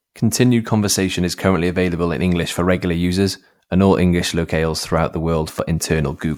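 A block of digital silence occurs at 5.59 s. For about 1.45 ms the speech drops to silence and returns with no fade on either side. A gap this short fits a 64-sample block that the playback or processing chain failed to fill in time. Because the hole is so brief, it is heard not as a pause but as a tick or dip, from the abrupt jumps in the waveform at its two edges.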